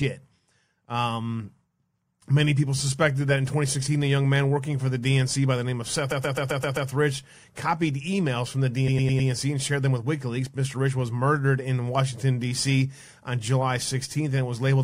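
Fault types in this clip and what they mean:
Repeated frames: the speech stutters twice, looping a short slice of sound back to back. From 6.10 to 6.89 s a 130.6 ms block plays six extra times, and from 8.87 to 9.29 s, after "copied emails from the" and before "and shared them with", a 104.5 ms block plays four extra times. The decoder received the same run of compressed frames more than once, which fits about five and four frames, lengthening the clip by 784 ms and 418 ms.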